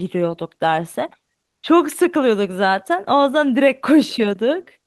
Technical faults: comfort noise in place of the background

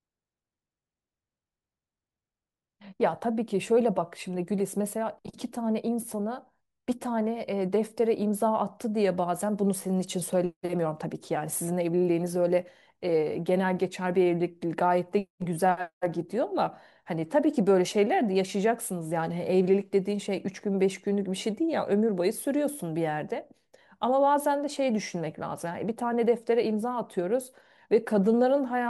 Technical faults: none

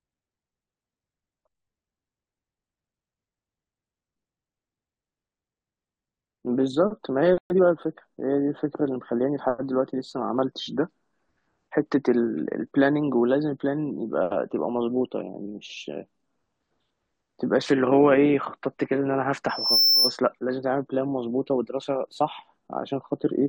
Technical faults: playback stall; time-compressed catch-up; loudspeaker feedback squeal

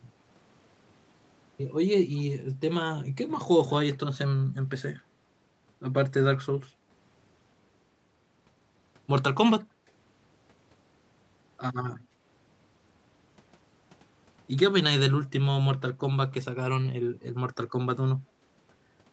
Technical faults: background gated by the echo canceller

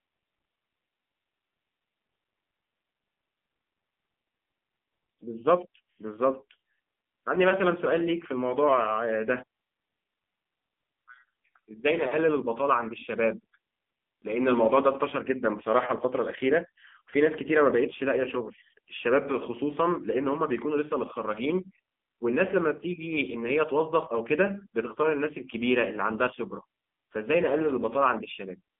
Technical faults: AMR narrowband mobile codec

